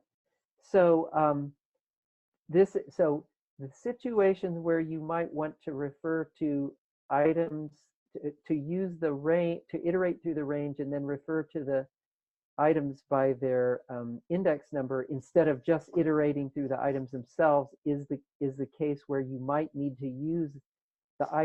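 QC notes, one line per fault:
6.81–7.72 s: repeated packet loss (robotic sound). Eight short holes, the longest 37 ms, are each patched by extending the preceding sound, filling about 165 ms in total, giving a choppy texture with pieces missing. Unlike a single dropout, the holes recur roughly every tenth of a second.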